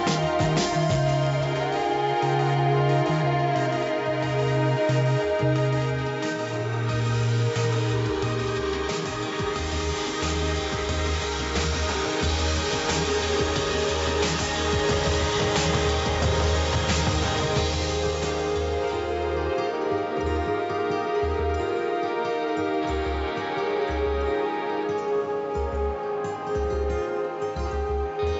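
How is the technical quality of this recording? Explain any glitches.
No glitches are audible: the signal is technically sound throughout, carrying the ordinary character of a call's microphone processing, with the lowest bass trimmed by its high-pass filter.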